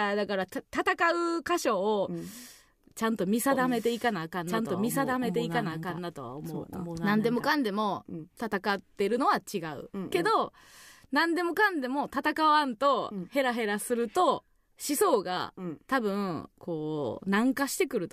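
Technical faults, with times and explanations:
3.51–7.49 s, doubled audio track: a second full-band copy of the speech runs roughly one and a half seconds behind the original at about equal loudness, so two overlapping streams are heard, with no decay or room colour on the copy, which starts and stops abruptly. The likely cause is a slower second capture path feeding the same mix. A spectrogram shows each harmonic pattern repeated, shifted by that lag; the waveform envelope changes suddenly at both edges.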